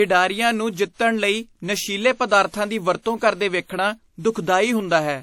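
Low-bitrate audio saved at a high bitrate throughout: content stops at 19.4 kHz, likely a low-bitrate encode that the later high-rate MP3 cannot restore.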